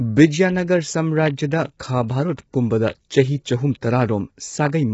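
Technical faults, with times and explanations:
Throughout: low-delay AAC compression, likely AAC-ELD; the speech sounds rough and grainy, with noise filling the gaps between pitch harmonics and nothing above 7.7 kHz. Short frames blur harmonics, unlike a plain low-pass, and the heavy damage suggests a bitrate near 16 kbps.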